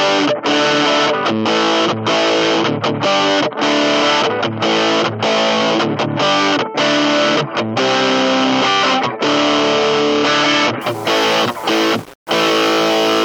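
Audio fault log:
10.81–13.25 s, low bit depth without dither: from 10.81 s to the end, the audio turns grainy and gritty, with a rough distortion that rises and falls with the signal. The quietest moments sputter or drop out instead of fading smoothly. The likely cause is requantisation to about 6 bits by plain rounding with no dither, so the rounding error follows the waveform and sits only around 25 dB below the signal.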